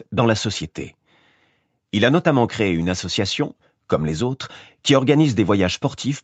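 No technical faults can be heard in this speech, which has simply passed through ordinary call microphone processing.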